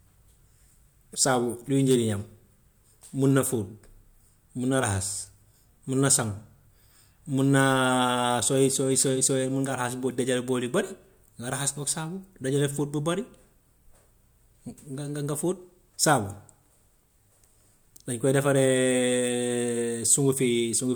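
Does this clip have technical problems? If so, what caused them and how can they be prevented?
No, the speech signal shows no technical faults at any point, so nothing here needs a cause traced or a fix applied.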